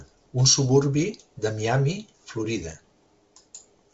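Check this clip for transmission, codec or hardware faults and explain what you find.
Nothing here sounds like a fault: the speech comes over a G.722 wideband telephone link at 56 kbit/s with nothing above about 7.8 kHz, which is simply how that link carries audio.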